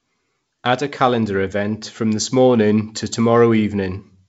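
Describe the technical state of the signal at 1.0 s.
At 1.0 s the speech is intact, carried by G.722 wideband telephone coding with a band limit near 7.7 kHz and only the light hiss that coding leaves at 56 kbit/s.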